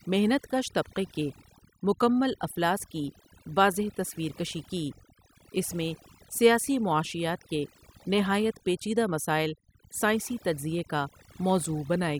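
Overdone noise removal runs through the whole clip, from start to finish. A noise reduction stage was set far too strong for a noisy recording. Whenever a frequency band came close to its noise estimate, it pulled that band down hard or shut it off. The quieter parts of the speech were cut along with the noise. The background drops and breaks up into twinkling, warbling specks.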